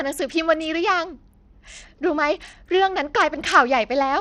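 Bluetooth SBC compression runs throughout this speech clip: treble flickers and drops out under gritty noise, likely from a starved bit pool, which points to a low bitrate near 80 kbps.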